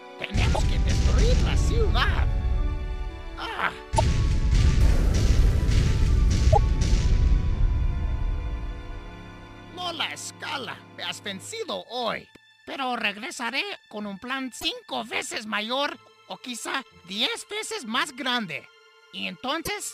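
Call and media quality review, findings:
Damaged data in a compressed stream: brief chirps, squawks, clicks or short holes at 0.51–0.59, 3.97–4.00, 6.49–6.58, 14.57–14.65 and 19.61–19.69 s. Decoder misreads corrupt frames, loses sync and searches for the next header. Spectrogram shows short broadband smears; waveform shows abrupt discontinuities.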